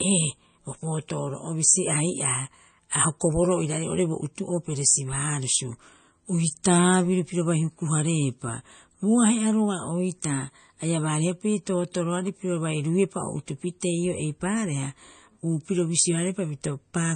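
Throughout the speech, nothing sounds above 9 kHz, and the sibilants turn watery and swirly, which fits a 32 kbps encode and points to MP3 compression as the likely cause; unlike a simple low-pass filter, weak detail flickers in and out. At 10.93 s, just before "baariha piri", a bit error spike gives one sharp full-band tick from a single corrupted sample, briefer and unrelated to the surrounding sound, unlike a dropout.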